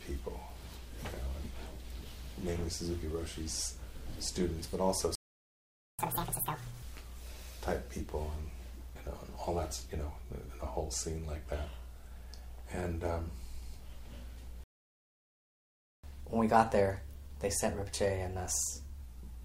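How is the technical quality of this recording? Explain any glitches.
The recording has two clear playback hiccups, each a dropout followed by a sped-up stretch.

At 5.15 s the sound cuts out for 0.84 s, and again at 14.64 s for 1.4 s. These are playback stalls, likely the player running out of buffered data or its thread getting blocked, so the output simply goes silent mid-flow.

Right after each gap there's catch-up at higher speed. The player resamples its backlog to regain lost time, so speed and pitch both jump. From 5.99 to 6.82 s it runs at 2x, sounding roughly ten semitones higher. From 16.04 to 19.04 s it's a gentler 1.15x, about two semitones up.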